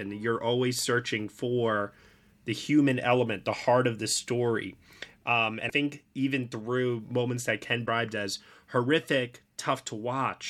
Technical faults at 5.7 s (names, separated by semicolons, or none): broken MP3 bit reservoir